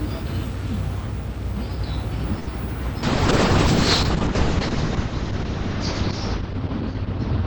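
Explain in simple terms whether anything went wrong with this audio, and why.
Two things went wrong. First, a short stall from a late packet: at 2.39 s a piece of the audio arrived late, so the receiver held the last sound for 76 ms, until 2.49 s, then carried on. Nothing is lost, but that moment sounds briefly stretched.

Second, a call bitrate drop: from 3.04 s to the end, the connection's estimate of its capacity fell sharply. The encoder was forced to describe the sound with far less detail and to drop everything above 8 kHz, so the audio turns rough and muffled.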